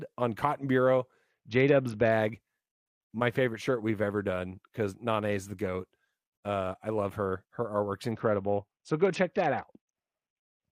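From 1.30 to 2.12 s and from 8.11 s to the end, a Bluetooth SBC bit pool drop dulls the treble and adds gritty noise without gaps, consistent with bit pool falling from 28 to 7.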